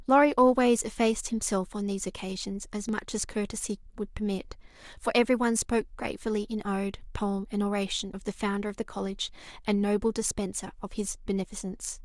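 Dropped buffers, likely from overruns, mark this speech clip at 2.89 s and 8.7 s. Each time a small slice of roughly 10 ms is missing and the sound on either side is butted together with no gap, so a brief jump forward is heard.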